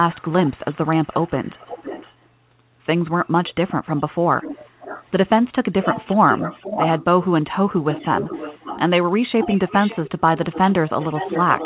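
From 0.1 to 2.26 s, 4.37 to 5.06 s, 5.82 to 7.04 s, 7.9 to 8.81 s and 9.41 s to the end, a delayed copy of the speech trails behind it by roughly half a second: an echo leak, likely from a loudspeaker on the far side whose echo canceller let its own playback through. It sits about 15 dB below the speech at first, then about 10 dB. Unlike room reverberation, it is a distinct repeat rather than a smeared tail, and it is band-limited to 4 kHz like the rest of the call.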